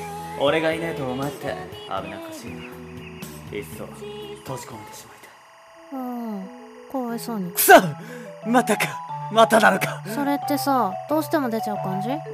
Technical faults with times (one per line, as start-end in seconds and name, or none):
0.00-12.33 timecode bleed